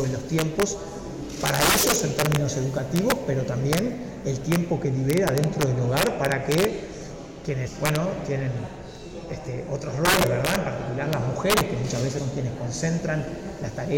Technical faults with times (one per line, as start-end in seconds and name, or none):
0.00-13.97 integer overflow
7.66 compressed frames skipped
10.22 compressed frames skipped
12.17 compressed frames skipped